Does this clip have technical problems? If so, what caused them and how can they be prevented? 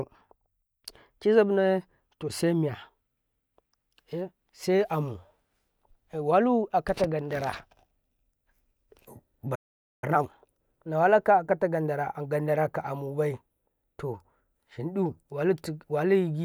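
Yes. A playback stall silences the speech from 9.55 to 10.04 s, about 475 ms, likely because the player ran dry or its thread blocked. It resumes rather than crackling like a dropout. Larger buffers and a non-blocking audio thread prevent this.

Time-compressed catch-up follows from 10.04 to 10.50 s, playing at 2x speed while keeping normal pitch, unlike a resampling speed-up. Gentler catch-up rates or skipping the backlog prevent it.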